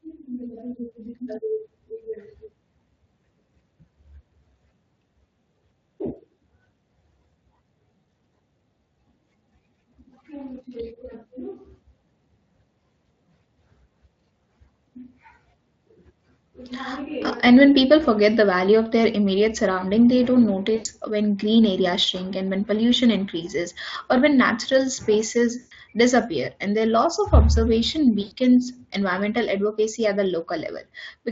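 At 20.75 to 20.89 s, after "immediate surrounding they don't", at 25.59 to 25.73 s, after "or when natural spaces", and at 28.21 to 28.32 s, after "their loss of observation", VoIP packet loss concealed by the speech codec: roughly 100 to 120 ms gaps in the Speex stream are filled by the decoder's extrapolated pitch and filter, giving a fading buzzy smear.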